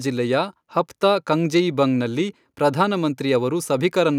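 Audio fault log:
No fault is heard anywhere in the speech recording. Nothing in it calls for a timed entry in this log.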